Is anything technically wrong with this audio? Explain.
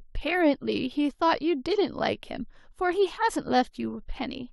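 No, the signal shows no technical faults and its level, timing and continuity all hold steady throughout.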